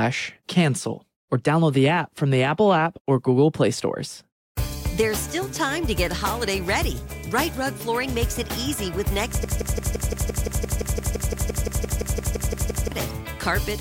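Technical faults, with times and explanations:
9.44–12.92 s: broken-record loop. A 172 ms fragment repeats 20 times, likely a stalled stream resending its last buffer; the underlying audio is lost.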